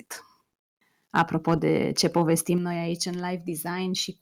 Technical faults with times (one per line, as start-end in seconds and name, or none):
1.15-1.22 microphone overload
1.48-1.52 microphone overload
1.98-2.18 microphone overload
2.58 microphone volume stepped down